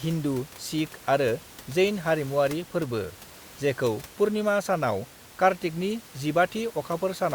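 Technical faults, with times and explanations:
No technical faults, with times and explanations, are present in this speech clip; the room noise sits about 21 dB below the speech and is part of the recording.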